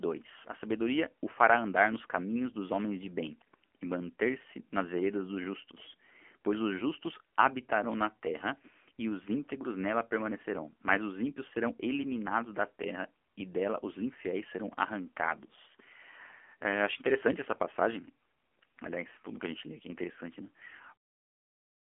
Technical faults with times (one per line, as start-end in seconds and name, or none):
0.00-21.90 AMR narrowband mobile codec